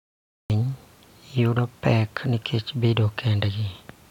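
A cut-off start runs from 0 to 0.5 s. The file holds digital silence until 0.5 s, then the speech appears abruptly in the middle of a sound, with no natural attack or fade-in. Recording or streaming began late, so that sound's opening was never captured.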